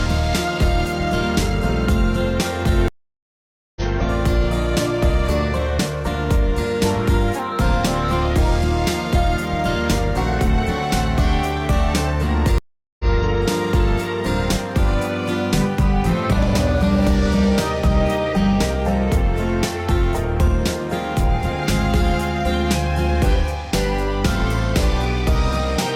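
At 2.88 s there's a stream reconnect: the connection dropped, leaving about 0.88 s of silence until 3.81 s, and the restarted decoder picks up roughly half a second further on, so a chunk is skipped. A second stream reconnect at 12.58 s gives 0.41 s of silence, but this time the audio resumes 93 ms earlier, so a short bit repeats by 13.09 s.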